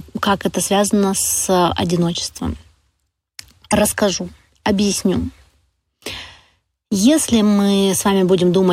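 The clip is speech with a broken MP3 bit reservoir at 3.70 to 3.72 s. The audio skips forward there. A short disturbance about 26 ms long interrupts it. That length matches a single MP3 frame. The likely cause is that frames were lost from the stream. MP3 frames store some of their data in the bytes of earlier frames. After the gap, the next frame looks back for that data and finds the wrong bytes, so it decodes wrongly.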